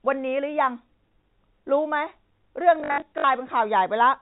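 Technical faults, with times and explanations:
2.8–3.24 s, packet loss with last packet repeated: within 440 ms, 240 ms went missing in gaps up to 60 ms long. Each gap was filled by replaying the last segment, which fits 20 ms packets. Runs buzz at 50 Hz, showing on a spectrogram as repeated blocks.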